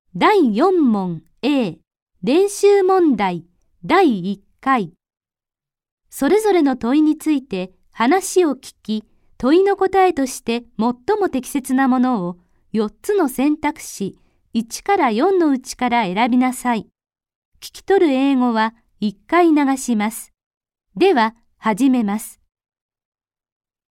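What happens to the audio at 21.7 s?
At 21.7 s the audio plays straight through with no dropout, glitch or other audible fault.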